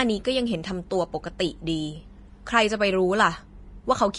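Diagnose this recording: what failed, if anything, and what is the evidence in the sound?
The codec stage failed. Throughout the speech, Vorbis compression is plainly audible: nothing above 10.6 kHz, a grainy, hissy treble and softened consonant attacks. This is likely a low-rate Vorbis encode, consistent with about 32 kbps, where coarsely quantised high-frequency residue turns into noise.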